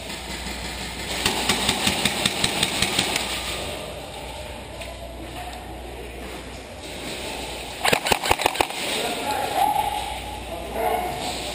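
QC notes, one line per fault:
throughout, MP2 compression: the sound is dull, with a gurgling, granular grit. That likely comes from MPEG Layer II coding at a low rate, around 80 kbps. Starved sub-bands switch off and flicker, and the rest are coarsely quantised. A spectrogram shows blocky, patchy upper bands blinking in and out.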